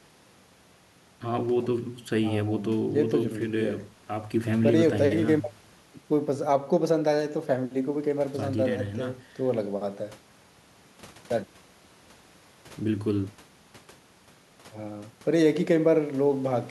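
No technical faults are audible.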